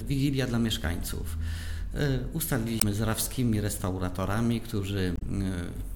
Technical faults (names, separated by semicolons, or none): damaged data in a compressed stream